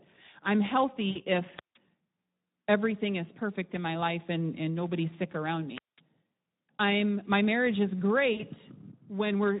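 Speex codec damage runs through the whole clip: sparse CELP excitation leaves the speech hoarse and noisy, which fits a low setting around 11 kbps. VoIP packet loss concealed by the speech codec appears at 1.09–1.23 s. The decoder stretched its last pitch and filter across a 60 ms gap, consistent with three lost 20 ms frames, producing a fading smear. A wireless microphone squelch dropout follows at 5.74–6.01 s, after "and nobody's sick around". The radio signal faded, hiss rose, and the receiver muted the output for about 0.2 s before the sound returned. Packet loss concealment recurs at 8.33–8.42 s, after "I'm my marriage is", where another 60 ms of extrapolated, decaying sound covers the gap.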